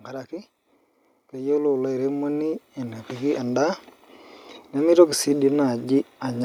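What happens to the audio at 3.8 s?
At 3.8 s the automatic gain rising is just finishing: from 1.31 s to 3.87 s the gain control, judging the input too quiet, has been lifting its gain step by step, about 10 dB in all. Unlike a talker simply speaking louder, the background noise climbs by the same amount as the speech, and unlike an abrupt level jump, the change creeps in over more than two seconds before settling.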